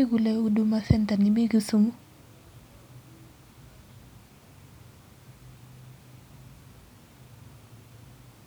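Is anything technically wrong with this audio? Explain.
No, there are no technical faults.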